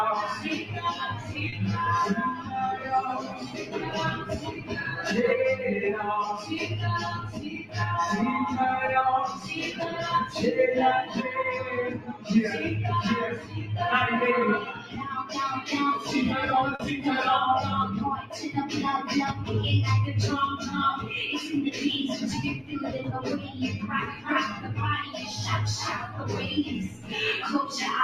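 A noise suppressor applied to music or sounds is active across the whole clip. Built for speech, it treats sustained tones and ambience as noise and swings the level by around 10 dB, so held sound pumps while sharp onsets mostly pass.

The sound cut by the noise suppressor first appears at 0.36 to 1.35 s, with a drop of about 9 dB. Around 1.49 to 1.60 s, a short concealed packet loss briefly smears the sound as the receiver extends the last audio over about 20 ms that never arrived. It is a quick wobble.

Further suppressor cuts follow at 2.35 to 4.72 s (about 9 dB), 6.41 to 7.76 s and 9.35 to 12.3 s (both about 11 dB), and 13.37 to 13.54 s (about 9 dB). Another comes at 14.75 to 15.32 s (about 8 dB). Sustained parts and decays sink and tails end early, unlike a smooth fade.

A second concealed loss at 16.75 to 16.81 s patches about 40 ms of missing audio, heard as a brief wobble or smear. 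The final suppressor cut, at 22.58 to 27.13 s, pulls decaying sound down by about 10 dB.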